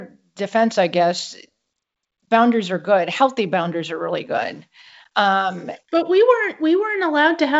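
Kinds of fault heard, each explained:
Nothing stood out on listening to the speech in this recording.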